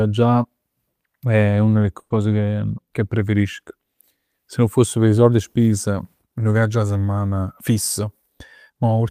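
Packets were most likely held up in transit at 1.99 s, emptying the jitter buffer, so this call audio freeze fills the gap until 2.12 s. The last sound stretches into a fading buzz or hiss for about 110 ms, then 20 ms of silence, and the speech resumes where it stopped, now running 110 ms later. From 7.46 to 8.99 s the jitter buffer held more audio than its target, so the receiver trimmed repeated pitch-period slices, about a tenth of a second in all. This jitter buffer speed-up makes the speech run at 106% speed with unchanged pitch, sounding slightly hurried.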